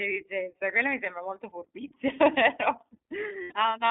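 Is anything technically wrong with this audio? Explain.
Yes. The speech has two technical faults.

The whole clip passes through the iLBC codec, a narrowband VoIP coder. The audio is confined to roughly 250 Hz to 3.6 kHz, so it sounds thin and boxy, with no air above that. Each short frame's excitation is coded on its own, without help from the previous frame. The coding damage is plainly audible. The voice sounds slightly rough and synthetic. The sound fits iLBC's 15.2 kbps mode with 20 ms frames.

From 3.42 to 3.53 s, there are lost iLBC frames. About 80 ms of audio is missing, which fits four dropped 20 ms frames. The decoder fills the gap by repeating the last pitch cycle, mixed with noise. It sounds like a brief held vowel, a little buzzy and breathy. Each iLBC frame stands alone, so the voice recovers almost immediately once packets arrive again.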